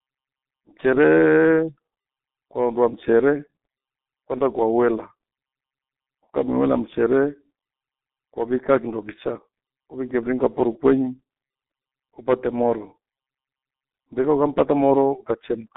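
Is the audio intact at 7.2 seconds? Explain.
No. At 7.2 seconds, as throughout the clip, the speech carries G.723.1 codec damage. Its 30 ms frames model the voice coarsely, at a quality that points to about 6 kbit/s, and the line band ends near 3.7 kHz, so the speech sounds muffled and hoarse with smeared consonants.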